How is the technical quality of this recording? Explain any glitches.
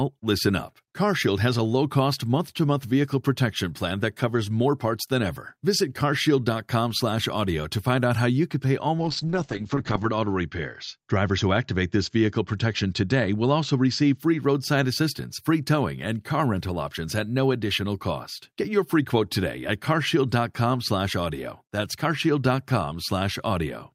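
The recording has one glitch, a call bitrate drop in the middle of the speech.

From 8.99 s to 14.23 s the sound degrades, consistent with the encoder falling from around 64 kbps to about 8 kbps after the call's bandwidth estimate fell. Starved of bits, the codec quantises coarsely and narrows the audio band from 20 kHz to 8 kHz. The speech turns muffled, rough and watery, worst for about 1.07 s at the lowest rate, before the full bandwidth returns.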